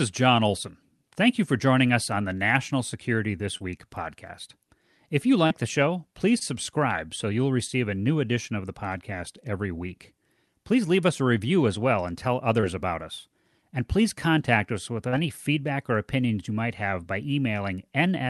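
Short concealed packet loss occurs five times, at 3.57–3.64 s, 5.47–5.52 s just before "the show please subscribe", 6.38–6.43 s between "the show please" and "subscribe so you'll receive", 12.61–12.64 s between "as well and tell" and "about us", and 15.08–15.14 s. In each case 20 to 40 ms of audio arrived too late for the Opus decoder, which bridged the hole with 18 to 40 ms of extrapolated sound before blending back into the speech, heard below the call codec's roughly 12 kHz ceiling. Unlike a plain dropout, nothing goes silent. The speech briefly smears or wobbles instead, and a short consonant can thin out or disappear.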